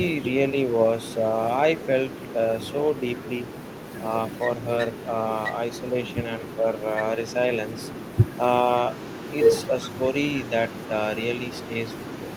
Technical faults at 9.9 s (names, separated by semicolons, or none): speech suppressed in double talk; echo leak